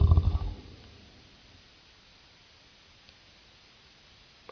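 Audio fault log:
throughout: wrong sample rate. The speech plays at one third speed and about 19 semitones low, consistent with 48 kHz audio played at 16 kHz without conversion. A spectrogram shows harmonics and formants squeezed to a third of their frequency, and the waveform is stretched threefold in time.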